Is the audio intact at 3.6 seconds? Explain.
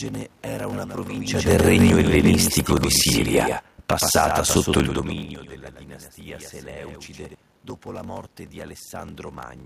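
No. A block size mismatch (padded) runs through the whole clip, so it affects 3.6 s. Each 1024-sample block is only partly filled and the rest is zero-padded, giving a 46.9 Hz buzz and speech slowed to 0.861× at near-normal pitch. The waveform shows regularly spaced flat gaps, and the spectrogram shows thin vertical stripes about 21 ms apart.

A doubled audio track also covers 3.6 s. It runs from 0.73 s to 7.34 s and starts just before "dopo la morte di". A full-band copy about 5 dB quieter trails by roughly 100 ms, likely from a second, slower capture path. On the spectrogram each syllable has a fainter duplicate shifted right, with no reverberant tail.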